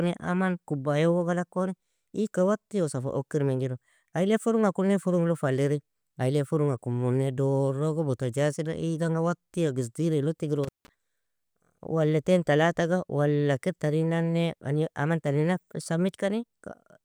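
A speech recording with an intermittent contact fault between 10.64 and 10.89 s, where the line opens for about 164 ms. Crackle marks both edges and faint hiss fills the gap, which points to a loose cable or plug rather than a clean digital dropout.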